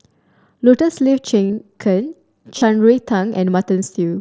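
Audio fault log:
1.48–1.53 s and 2.58–2.62 s, concealed Bluetooth headset packet loss: headset audio packets went missing, and the phone filled each gap by repeating the closest-matching recent stretch of waveform. The first gap loses about 37.5 ms spread over 60 ms, with a longest run of 30 ms. The second loses 30 ms. This fits runs of lost 7.5 ms mSBC frames. The repeated fill gives a brief buzzy, held tone, with a slight warble as real audio resumes, heard against the mSBC codec's light grain.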